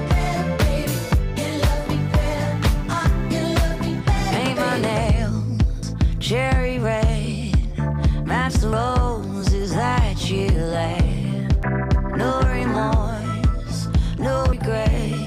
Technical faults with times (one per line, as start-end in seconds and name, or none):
2.93 audio missing between chunks
5.83 audio missing between chunks
8.73 audio missing between chunks
11.63 audio missing between chunks
14.53 audio missing between chunks